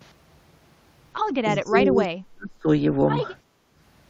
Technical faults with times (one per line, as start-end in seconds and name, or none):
1.66-2.67 speech suppressed in double talk
3.44-3.75 background gated by the echo canceller